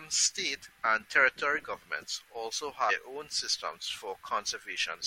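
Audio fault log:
0.65–0.67 s and 2.89–2.91 s, damaged data in a compressed stream: two brief glitches of about 20 ms each break into the speech, where corrupted bytes made the decoder misread frames and lose sync until it found a valid frame header. The garbled decode gives a chirp, squawk, click or short hole. A plain dropout or packet-loss gap would leave silence or a smoothed-over gap, and a simple click would be a single broadband tick.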